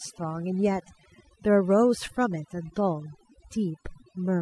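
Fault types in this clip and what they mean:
overdone noise removal: Noise reduction was pushed too hard across this whole speech clip, pulling bands near the noise estimate down to nothing. The background drops and breaks up into twinkling specks. A low-pass filter would dull it evenly instead, never leaving chirping fragments.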